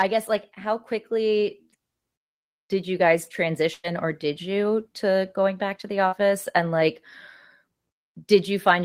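Speech, with two stretches of packet loss. From 3.73 to 3.87 s a burst of packet loss leaves about 100 ms filled by a continuation of the last sound that fades as it goes, with about 10 ms of outright silence. The speech then picks up 100 ms further on, with that stretch missing. On a spectrogram this shows as flat, smeared harmonics or hiss that dim before the speech picks up again, and the waveform shows a decaying envelope with a brief drop to silence. Inside that stretch, at 3.84 to 3.86 s, and again at 6.12 to 6.14 s, a lost packet was rebuilt from error correction. The decoder played a low-bitrate copy carried in the next packet, so there is no gap, but those 20 ms sound rougher and noisier. On a spectrogram they appear as a thin, grainy band of slightly blurred detail. From 6.08 to 6.28 s there is a short concealed packet loss. About 32 ms were synthesised from the preceding sound and blended back, and 40 ms of the original are missing, with a little extra time added. 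This is heard as a brief smear or wobble, and it shows as a short smeared patch with a slight seam in the waveform.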